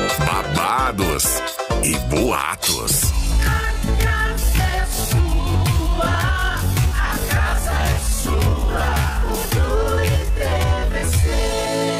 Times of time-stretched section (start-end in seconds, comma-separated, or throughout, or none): 3.23-12.00